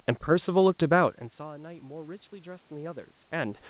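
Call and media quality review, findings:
Automatic gain rising, 1.37 to 3.64 s: the talker drops back around 1 s, input down about 21 dB, and the AGC slowly claws back about 7 dB over two-plus seconds. Voice and room noise swell together through the G.711 path's 4 kHz band.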